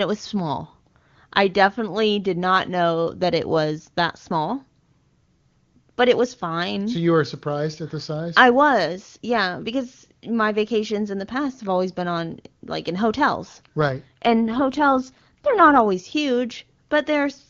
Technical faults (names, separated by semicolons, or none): AMR rate drop